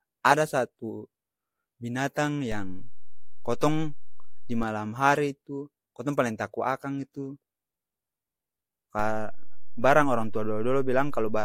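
A DC step shifts the waveform's zero line by about -26 dBFS from 2.52 to 4.63 s, just before "hari tu kotong paleng", then by about -24 dBFS from 8.99 s to the end. Each jump gives a low thump while the speech continues unaffected.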